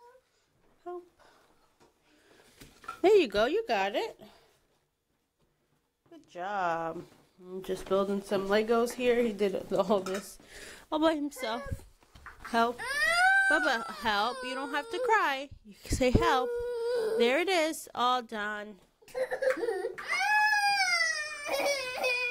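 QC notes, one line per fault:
No faults detected.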